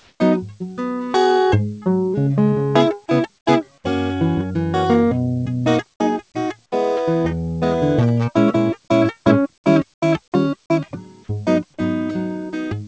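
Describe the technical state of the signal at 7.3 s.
At 7.3 s the music passes intact through the WebRTC call path, with the G.722 codec's band limit leaving nothing above 8 kHz, and no fault is present at that moment.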